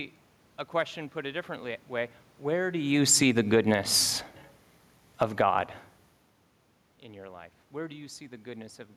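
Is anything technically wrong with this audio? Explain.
Yes. The automatic gain control misbehaves, pumping the level down and up within a few seconds.

Automatic gain falling occurs from 2.45 to 4.36 s, by about 5 dB, and from 5.07 to 5.48 s, by about 8 dB. The control judged the input too loud and cut its gain. It works gradually, not instantly. So the speech sinks over the span. The room noise sinks with it. That shared drop shows a gain change, not a quieter talker, even though the talker also shifts position around 2.5 s.

Automatic gain rising occurs from 3.63 to 4.11 s, by about 4 dB, and from 5.39 to 5.90 s, by about 7 dB. In the second case the input had fallen by about 23 dB, and the control pushed its gain back up to compensate. Speech and background swell together over roughly half a second. Overlapping each fall, this produces an audible pumping. Another real movement by the talker follows near 6 s.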